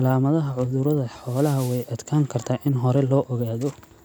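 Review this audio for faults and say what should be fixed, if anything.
A wireless microphone noise hit runs from 1.18 to 1.93 s, lasting about three quarters of a second. The FM radio link fades as reflected signals cancel at the receiver, so receiver noise rises and covers the speech as a swish of static. On a spectrogram it appears as a broadband haze spread across the band for that span. The waveform gains a dense, noisy layer over the speech. Diversity reception or a clearer line of sight to the receiver would prevent the fade.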